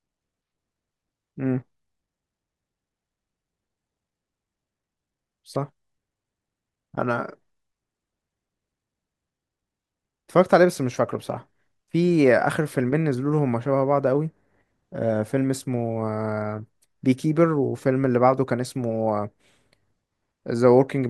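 No technical faults can be heard anywhere in this recording.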